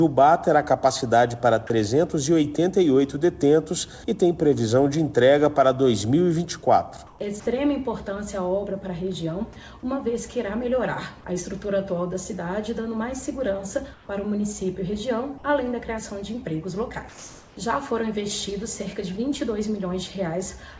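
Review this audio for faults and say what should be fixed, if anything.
Comfort noise in place of the background at 7.07–7.19, 13.94–14.09 and 17.09–17.57 s, likely from discontinuous transmission: featureless hiss about 3–4 dB quieter, a smooth uniform patch on a spectrogram. Turning off DTX at the sender would keep the real background.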